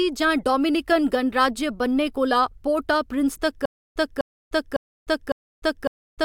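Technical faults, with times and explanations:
3.65–6.24 s: stutter with silent gaps. From 3.65 s to the end, a burst of speech about 0.25 s long plays, then drops to dead digital silence for about 0.3 s. The same burst returns four times, once every 0.55 s, at a steady pace. The player or stream likely stalled and replayed its last buffered fragment at each retry before running empty. The speech that should have filled this stretch is missing.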